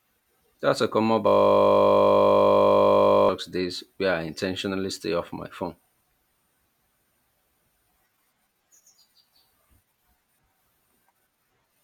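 From 1.27 s to 3.29 s, right after "a common", the audio locks into a system hang loop. The playback host stalled while the sound hardware kept replaying its ring buffer, so one 20 ms slice repeats about a hundred times, which fits a 20 ms buffer. Because the slice is so short, the repetition fuses into a steady 50 Hz buzz rather than a stutter. Normal audio resumes at "days where I intentionally".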